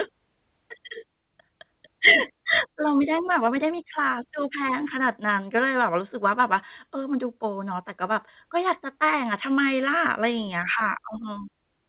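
At 2.68 to 2.70 s a stretch of audio, about one and a half seconds of it, was dropped while later packets were already waiting, and no fill was inserted. That is a skip ahead. The speech jumps forward abruptly, with the material on either side butted straight together, so a chunk of the utterance simply vanishes and the join sounds like a hard splice.

From 2.74 to 6.01 s the jitter buffer, still holding more audio than its target, worked the excess down by repeatedly cutting out short segments one or a few pitch periods long, removing roughly 0.4 s in total. This jitter buffer speed-up plays the speech at about 112% of its normal rate while the pitch stays unchanged, so the talking sounds rushed over those three seconds. Everything is heard through the narrow, telephone-like band of the call path, with nothing above 4 kHz, which fits G.711 mu-law coding.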